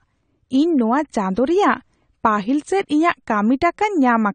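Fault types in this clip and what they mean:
AAC compression: likely a low-bitrate AAC-LC encode, near 32 kbps by ear, stripping high frequencies and detail, so the speech sounds dull and smeared throughout.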